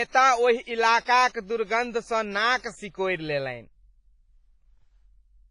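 The speech has likely passed through WMA compression at a low bitrate, with heavy damage that fits roughly 24 kbps. This transform codec works on long blocks, so its quantisation noise smears across tens of milliseconds around each sound, and it discards weak spectral detail. Throughout the clip the result is ringing and washy, with a hiss that swells and fades with the speech, and nothing is left above 10.4 kHz.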